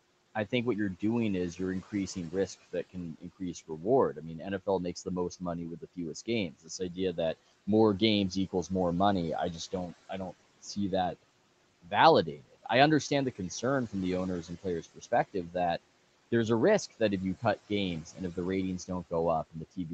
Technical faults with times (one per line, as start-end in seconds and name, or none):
1.56-8.70 speech cut by the noise suppressor
9.71-10.77 speech cut by the noise suppressor
11.82-15.55 speech cut by the noise suppressor
16.91-19.93 speech cut by the noise suppressor